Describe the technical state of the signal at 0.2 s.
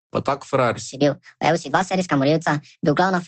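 At 0.2 s the speech signal is intact, with no dropout, glitch or other fault, and the sound carries only the ordinary band-limited character of a normally working Opus call path.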